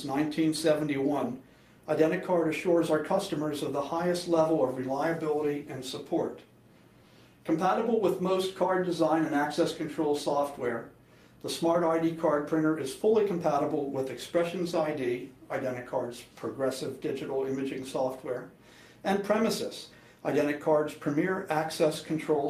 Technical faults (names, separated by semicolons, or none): none